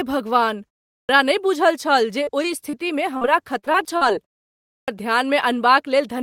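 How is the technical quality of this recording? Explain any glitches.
The recording has a few transmission glitches: two swallowed word onsets, a run of brief dropouts, and one stretch that turns choppy.

Clipped start after a pause, at 0.92 s and 4.68 s. After silences of 0.3 s and 0.5 s, the output path seems to doze and needs a moment to come back. The first 170 ms and then 200 ms or so are lost, so the sound bursts in abruptly, missing its opening.

Short concealed packet loss, at 2.23, 2.43, 2.70 and 3.17 s. Each time, roughly 20 to 40 ms of audio didn't arrive in time. The receiver papered over the hole by extending the previous sound and then blending back in, which you hear as a quick smear or wobble.

Repeated packet loss (robotic sound), from 3.59 to 4.03 s. Five gaps land close together here, the longest 40 ms, and about a quarter of that stretch is patched-in filler. Because one patch barely ends before the next begins, the sound gets choppy with pieces missing.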